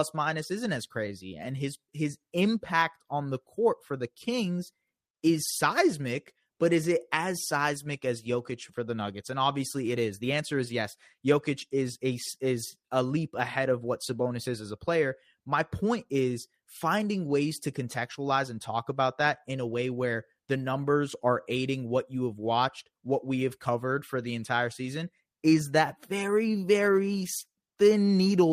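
No technical faults can be heard anywhere in the recording.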